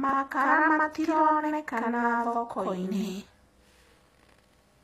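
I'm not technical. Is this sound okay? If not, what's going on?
No. Channel delay (doubling), from start to finish: one side arrives about 93 ms late, which fits a 4096-sample buffer, so each sound is heard twice like a quick echo.

HE-AAC compression, throughout: the treble sounds gritty and metallic, likely from this codec rebuilding the high frequencies from copied lower ones instead of keeping the originals.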